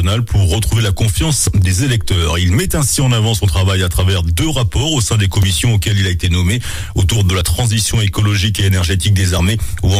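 Skips at 1.47, 5.43 and 7.41 s each drop roughly 20 ms and butt the edges together; the two-second spacing points to audio likely missing between chunks.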